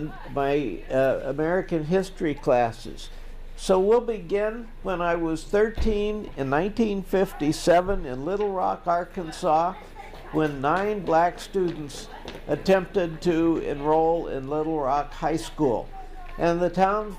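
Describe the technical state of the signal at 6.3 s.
At 6.3 s the signal is intact, with no dropout, click, distortion or other audible fault at that point.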